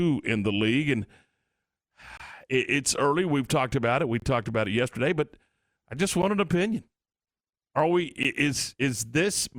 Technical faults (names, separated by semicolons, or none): gap between stream segments